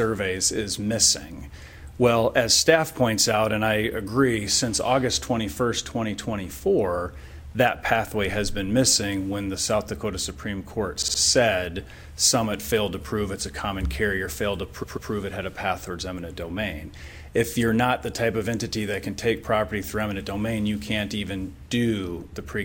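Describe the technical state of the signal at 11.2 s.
A stutter runs from 11.01 to 11.19 s, with a 58 ms slice of sound playing three extra times in a row. This is repeated frames: a run of compressed frames was stored or sent more than once, so the decoder replays it, adding 174 ms.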